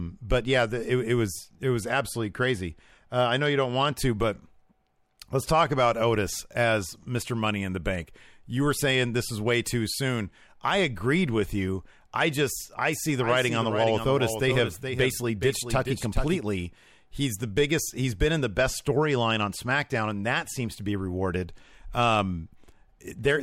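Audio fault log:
12.93–16.41 s, doubled audio track: a second full-band copy of the speech runs about 0.4 s behind the original, roughly 10 dB quieter, so each syllable is followed by a faint, clean repeat. The copy carries no decay or room colour, which separates it from a natural echo, and it cuts in and out abruptly at both ends. The likely cause is the signal being captured twice, once through a slower path, or an edit that leaves two offset copies overlapping.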